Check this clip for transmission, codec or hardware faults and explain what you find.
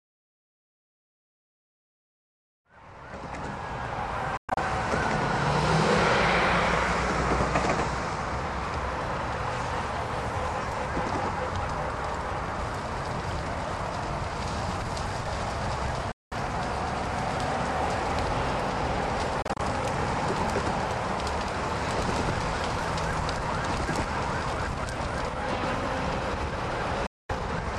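Four brief gaps are present. Bluetooth dropout at 4.37, 16.12, 19.42 and 27.06 s: packets likely missed their delivery deadline to the headphones and were discarded, so output goes abruptly silent for about 0.08 to 0.22 s, stuttering in fragments at 4.37 and 19.42 s, then resumes further along as if playback continued.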